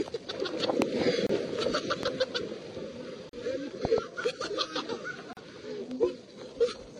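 A sharp loud pop hits at 0.82–0.84 s, about 25 dB above the sound, which continues underneath; a voltage pulse from a plug, switch, static or driver glitch is likely behind it. At 1.27–1.29 s a 27 ms silence cuts in with smeared edges, a gap at a join of encoded pieces where encoder delay and frame padding were left untrimmed. A double pop at 2.03–2.10 s, about 15 dB up, likely comes from the same kind of pulse. Another gap, 38 ms, opens at 3.29–3.33 s, then a double pop at 3.85–4.00 s, about 20 dB up. A final 38 ms gap falls at 5.33–5.37 s, matching the 2 s spacing of joins.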